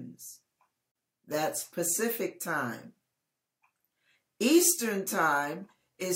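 At 0.92 s the sound stops dead for about 37 ms, then picks up at 0.95 s exactly where it left off. This is a gap at a join of encoded pieces: two separately encoded segments were butted together without trimming, so the encoder's start-up delay and the padding on the final frame both remain as silence. The codec smears the edges, so the fully silent part is shorter. Unlike a dropout, nothing is skipped; the sound is delayed, not lost.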